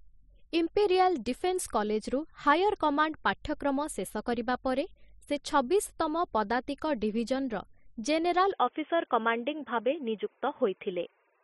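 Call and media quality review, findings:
Speech turns dull and narrow from 8.52 s to the end. Nothing above 3.5 kHz. No gap, level steady, faint new background noise. Likely input switched to a poorer device.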